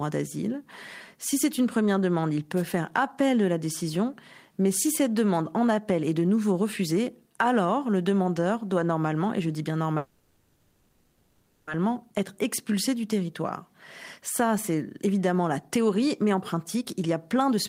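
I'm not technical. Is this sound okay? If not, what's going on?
No. At 2.56 to 2.63 s there is a wireless microphone noise hit: a brief swish of static as the radio link from a wireless microphone fades for a moment. It is a burst of noise over the speech, with no stall or change in pace.

From 9.97 to 11.70 s the last bit of sound is stretched into a fading buzz for about 1.7 seconds, then the speech resumes exactly where it left off. Nothing is lost and it never goes fully silent. This is likely a call audio freeze, where delayed data left the receiver with nothing new to play.

From 15.58 to 17.58 s there is a jitter buffer speed-up. The speech runs about 16% faster, sounding hurried while keeping its normal pitch, because the receiver cut out roughly a third of a second in tiny pieces to reduce delay.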